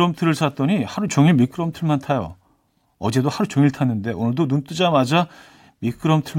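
Speech with a sudden gain jump of about 5 dB from 1.08 to 1.51 s, likely from an unramped level change. Background noise steps up too, unlike gradual AGC.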